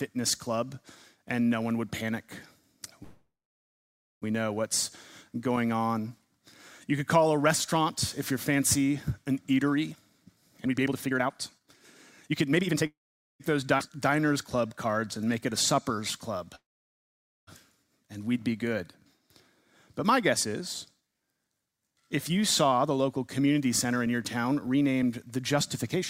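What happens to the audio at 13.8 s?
At 13.78 to 13.81 s the audio lurches forward with only a tiny gap: a skip ahead, where roughly a third of a second was dropped and playback rejoined later audio almost directly.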